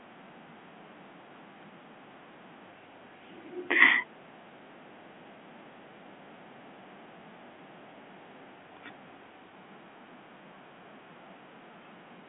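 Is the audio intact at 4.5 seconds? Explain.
Yes, the audio is intact at 4.5 seconds, with only the narrow telephone band of G.711 coding, which stops below about 3.6 kHz, and no fault at that point.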